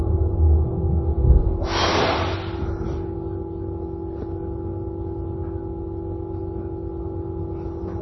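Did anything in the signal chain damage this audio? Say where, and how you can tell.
Yes, at the codec stage, throughout the clip: nothing is present above 5.9 kHz, and the remaining content sounds heavily watery and swirly. This is likely MP3 compression at a very low bitrate, around 24 kbps, cutting the treble and switching weak frequency lines on and off between frames.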